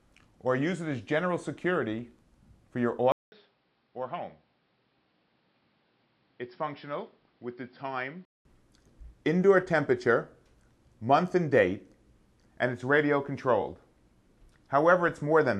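At 3.12 s a gap of about 200 ms opens, and the sound returns dull and boxy, with nothing above 5.5 kHz, noticeably quieter (roughly 10 dB down) and over a faint new noise floor. At 8.45 s full clarity comes back. This is likely an input switched to a poorer device. A filter or bandwidth drop alone would not bring the silence at the switch together with the shifts in level, tone and background noise.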